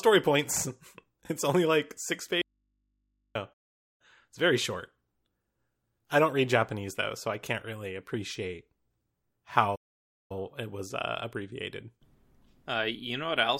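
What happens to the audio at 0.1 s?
Nothing goes wrong at 0.1 s; the speech plays through that moment intact, with no dropout, click or distortion.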